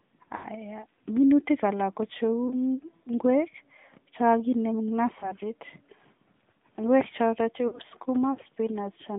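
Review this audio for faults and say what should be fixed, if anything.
The whole clip carries AMR narrowband mobile codec damage. The speech is confined to 150 Hz–3.6 kHz, buzzy and synthetic, which fits the 10.2 kbps mode. Use a wideband path instead.

Lost AMR speech frames cause dips and warbles at 0.36–0.48 s, 2.48–2.51 s, 5.20–5.33 s after "chekakinem eng", and 7.68–7.80 s. The decoder repeated the last good settings with fading gain. Improve radio coverage or error protection to prevent them.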